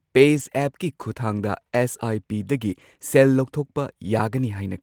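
A brief roughening, noisy and grainy but with no dropout, appears from 0.37 to 0.43 s and again, a little longer, from 2.71 to 2.81 s. Each is a lost packet rebuilt from error correction. Packets went missing, and the decoder filled the holes with the low-bitrate backup copies carried in the packets that followed, so the speech stays continuous but coarser. The rougher stretches fit about two and three lost packets respectively.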